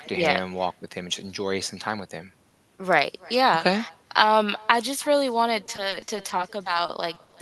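From start to finish there's echo with no canceller: a faint copy of the speech trails each phrase by roughly a third of a second, sitting about 25 dB under the direct sound. That's the far end's loudspeaker feeding back into its own microphone with nothing subtracting it, so the talker's own voice returns after the network round trip. It's quiet, but you can hear a thin smear after each phrase.

Then, from 5.66 to 6.40 s, repeated packet loss (robotic sound) kicks in. It's a run of short dropouts, none longer than about 20 ms. Around 100 ms goes missing in total, and the concealment stretches the previous sound to fill about 140 ms, roughly a fifth of that stretch. The speech turns choppy. A second burst follows from 6.86 to 7.34 s, with about 60 ms missing and 80 ms filled, and it has the same choppy, clipped-off texture.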